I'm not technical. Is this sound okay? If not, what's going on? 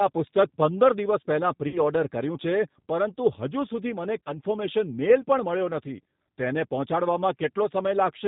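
No. Throughout, the speech sounds slightly rough, thin and a bit robotic, as if heard over a cheap phone line. That is the G.729 codec, an internet-calling format that rebuilds the voice from a simplified model and drops all the higher, crisper sounds.

At about 1.68 to 1.81 s, and again briefly at 4.24 to 4.30 s, the sound turns buzzy and smeared and then fades. This is VoIP packet loss concealed by the speech codec: pieces of the audio went missing, and the decoder filled the gaps by stretching out what it had just heard.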